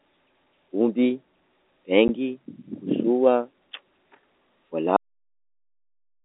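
At 2.08 s a single packet went missing and the receiver filled the gap with silence, giving packet loss filled with silence: a 10 ms hole with hard edges. At 4.96 s the final buffers were never played, a cut-off end, so the sound stops mid-stream and drops straight to digital silence with no decay. Throughout, the telephone band of roughly 250 Hz to 3.7 kHz reflects G.711 telephone coding, which fits a 64 kbps A-law line.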